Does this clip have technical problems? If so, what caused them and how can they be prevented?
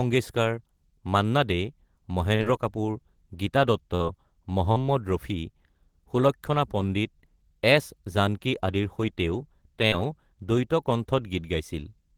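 Yes. Brief smears or wobbles in the speech at 2.35, 3.95, 4.72 and 9.88 s are short concealed packet loss. Each time, about 40 ms of audio failed to reach the decoder in time, and the receiver bridged the gap by extending the preceding sound before blending back. A larger jitter buffer, forward error correction, or a more stable network path would prevent it.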